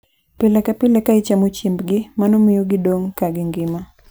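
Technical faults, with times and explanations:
No technical faults are audible in the speech recording.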